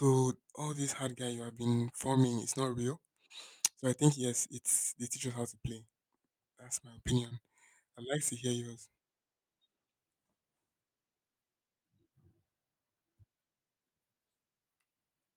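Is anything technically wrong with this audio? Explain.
No, nothing is technically wrong with this speech recording. No fault can be heard at any point in how it was captured, processed or reproduced.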